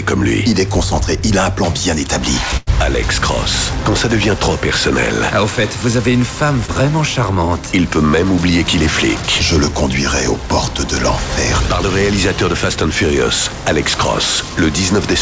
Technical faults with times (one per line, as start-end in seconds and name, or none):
2.57-2.70 burst of packet loss
6.66-6.71 short concealed packet loss